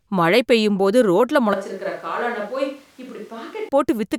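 From 1.54 s, just after "மழை பெய்யும் போது ரோட்ல", the voice abruptly turns hollow, roomy and bass-light, about 10 dB quieter, with more background noise, then snaps back at 3.69 s: likely a switch to a distant microphone after the close one dropped out.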